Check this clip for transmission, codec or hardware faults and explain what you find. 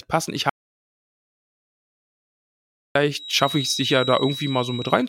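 Two faults turn up in this speech clip: a long dropout to silence early on, then a feedback whistle that runs to the end.

From 0.50 s to 2.95 s there is an audio dropout to silence. The input feed was most likely lost through a disconnected device, a failed link or an accidental mute, while the recorder kept writing silence. The speech cuts off abruptly, leaving about 2.46 s of dead silence with no room tone, and then resumes mid-flow. Whatever was said in that gap is gone.

From 3.09 s to the end there is a feedback whistle. The loudspeaker-to-microphone loop is likely sitting right at the edge of feedback, so a single 3.8 kHz frequency keeps ringing without building into a howl. It comes through as a thin, steady whistle behind the speech, roughly 10 dB below it, swelling and fading slowly in level.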